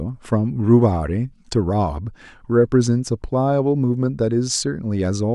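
No technical faults can be heard anywhere in the speech. No moment in the recording stands out as a problem.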